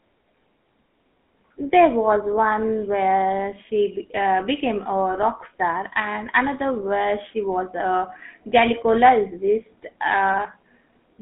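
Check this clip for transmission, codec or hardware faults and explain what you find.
The speech passes through a GSM full-rate codec throughout. The coder models the vocal tract and drives it with sparse, regular pulses, leaving a plainly audible buzzy, gravelly roughness, a 200 Hz to 3.4 kHz phone band, nothing above 3.8 kHz, and a sound that fits 13 kbps.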